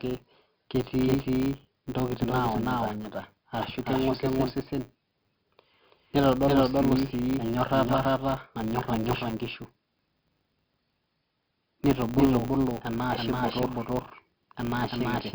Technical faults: doubled audio track; 4-bit ADPCM compression; filter restarted on every block

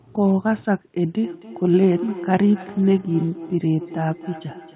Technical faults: feedback echo between two devices

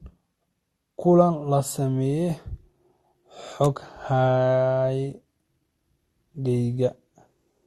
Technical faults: transcoding between lossy codecs; electrical switching spike

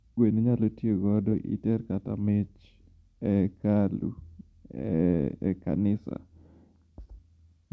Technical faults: none

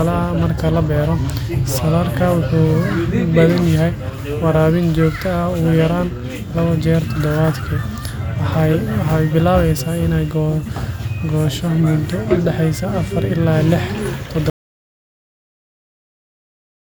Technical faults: audio dropout to silence

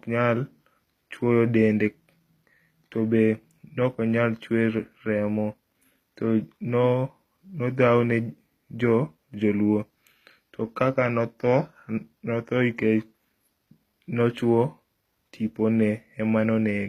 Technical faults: HE-AAC compression

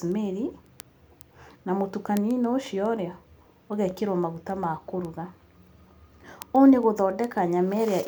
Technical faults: word clock ticks

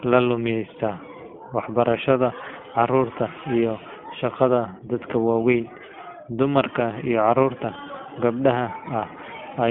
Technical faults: iLBC codec

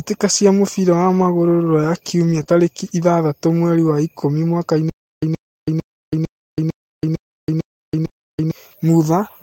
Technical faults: lost packet rebuilt from error correction; short concealed packet loss; stutter with silent gaps

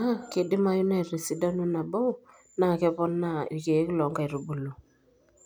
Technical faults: none

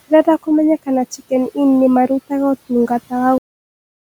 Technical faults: cut-off end

